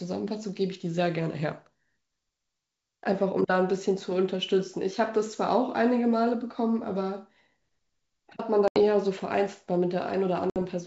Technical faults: packet loss on an ADPCM call

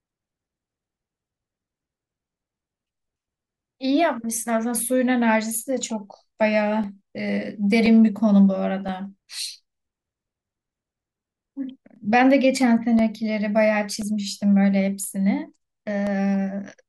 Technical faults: periodic USB or driver dropouts

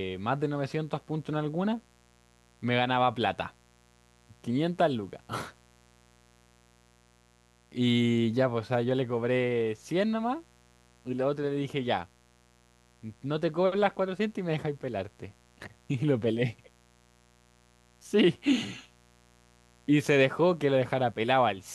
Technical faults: mains buzz

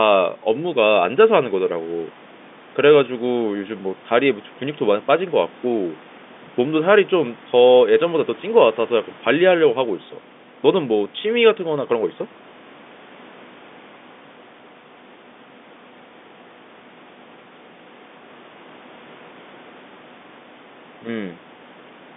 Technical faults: none

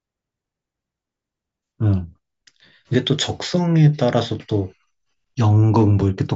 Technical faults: none

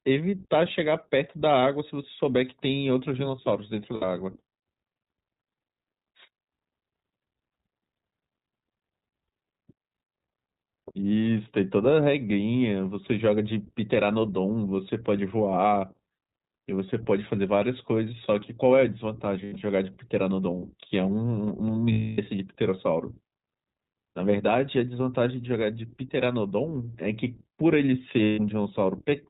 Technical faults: iLBC codec; lost iLBC frames

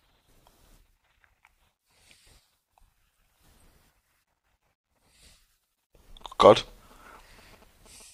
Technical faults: GSM signalling bursts

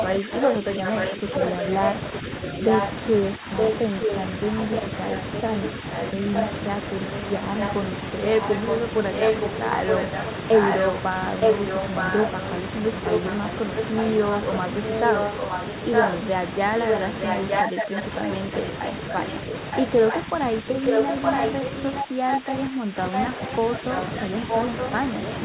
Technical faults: echo leak; speech suppressed in double talk

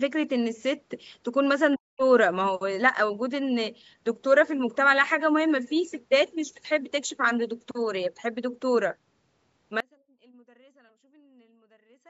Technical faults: speech suppressed in double talk; audio dropout to a faint residue

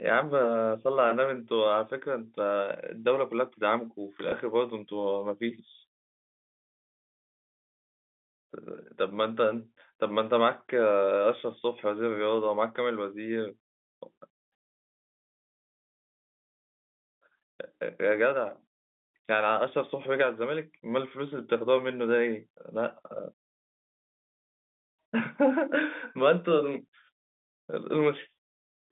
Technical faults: packet loss with last packet repeated

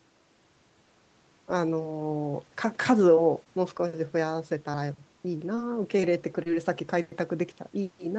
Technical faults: scattered short gaps; short concealed packet loss; short stall from a late packet

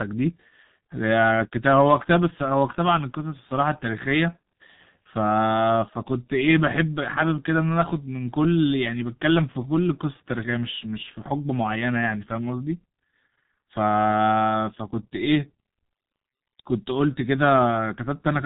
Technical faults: G.723.1 codec

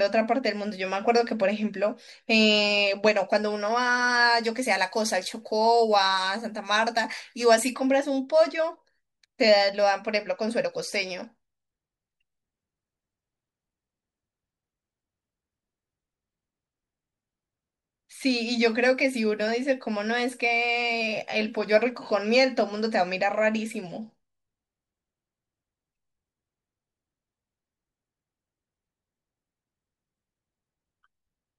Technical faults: pre-emphasis left on

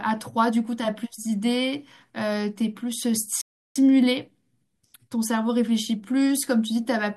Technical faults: rebuffering stall

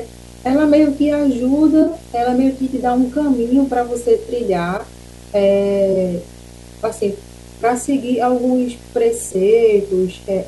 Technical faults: video or display buzz; corrupt frame concealed; corrupt frame decoded

